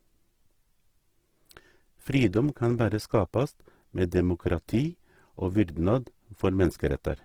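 Speech with plainly audible Opus compression throughout: grainy, rough; spectrogram shows noise-filled bands, not holes, up to 20.4 kHz, likely a 16 kbps encode.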